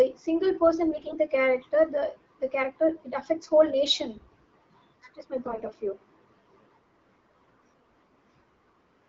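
In this speech clip carried over AMR-WB at 12.65 kbit/s, AMR bit errors strike twice, from 0.92 to 1.19 s and again from 5.46 to 5.72 s. Flipped bits in the weakly protected parts of the frames slip past the checksum, which misplaces the excitation pulses and skews the fine pitch, gain and spectral values. The voice keeps roughly its pitch and loudness but turns hoarse, scratchy and gargly. The first burst, with about twice the error rate, sounds rougher.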